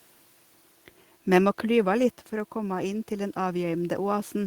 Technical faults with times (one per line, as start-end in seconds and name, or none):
1.37-4.47 automatic gain rising